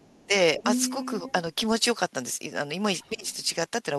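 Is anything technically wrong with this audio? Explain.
Yes. Two echo-cancellation faults appear.

Speech suppressed in double talk occurs at 0.00–0.09 s, 0.27–0.31 s and 3.12–3.25 s. The talker's speech is pulled down sharply, by roughly 30 dB at the start, a milder 10 dB or so at 0.27 s, and around 20 dB at 3.12 s. The likely cause is an echo canceller that, faced with both sides talking, could not tell near speech from loudspeaker echo and attenuated everything. The waveform shows abrupt envelope notches. A spectrogram shows brief vertical bands of reduced energy.

The other side's voice leaking through appears at 0.10–0.26 s, 0.59–1.10 s, 1.27–1.32 s and 3.01–3.09 s. Most of these are faint: barely audible at 0.10 s and 3.01 s, and well below the speech at 1.27 s. From 0.59 to 1.10 s, however, a second voice sits only slightly below the talker's. This is likely residual loudspeaker echo that the canceller failed to subtract from the microphone. 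A spectrogram shows a second, overlapping harmonic pattern, clearest in the longer stretch.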